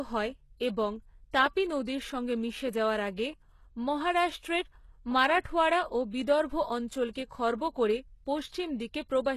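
A low-bitrate codec, likely HE-AAC at around 16 kbps, carries only the lower spectrum and synthesises the treble by copying bands upward. Throughout this speech, nothing remains above 12.3 kHz, and the rebuilt top sounds plainly artificial, with sibilants turning gritty and lispy.

Pre-echo occurs where the codec smears its block-wide quantisation noise ahead of sharp onsets. From 5.40 to 5.45 s, a 47 ms hiss leads into "ও বিদর্ভ". From 7.13 to 7.15 s, after "ও বিদর্ভ", a 22 ms hiss precedes "খর্ব করে", softening that attack.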